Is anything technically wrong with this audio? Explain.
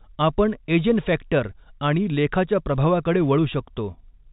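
No, nothing is technically wrong with this audio.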